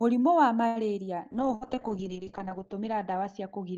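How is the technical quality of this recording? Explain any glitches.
The recording has three network-related glitches.

At 0.67 to 0.79 s there is a short stall from a late packet. The jitter buffer ran dry and the receiver stretched the sound for 83 ms, then carried on with nothing skipped. That is what separates it from loss.

From 1.34 s to the end there is a call bitrate drop from 40 to 7 kbps, with bandwidth narrowing from 20 kHz to 8 kHz. The speech turns muffled and rough, and it stays that way rather than recovering.

At 1.55 to 1.64 s there is a burst of packet loss. About 62 ms of concealment fades into a held buzz or hiss, and then about 60 ms of speech is missing when the audio resumes.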